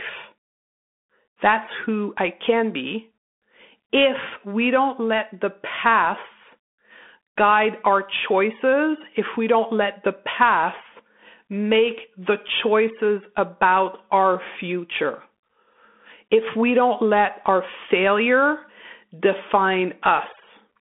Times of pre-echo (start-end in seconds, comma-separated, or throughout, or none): none